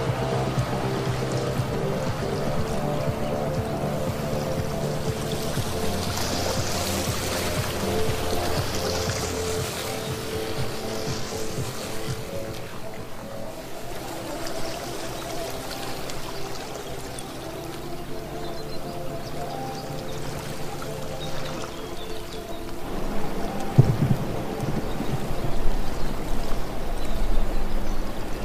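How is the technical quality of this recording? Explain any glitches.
The recording has one technical fault, a stretch of channel delay (comb filtering) from 9.32 to 13.91 s. Here one channel arrives about 20 ms behind the other, and when the two are summed to mono, the shared content cancels at a regular series of frequencies starting somewhere around 20 Hz. The audio turns rough and slightly doubled. On a spectrogram this appears as evenly spaced horizontal dark bands across that section, and the waveform looks slightly smeared in time.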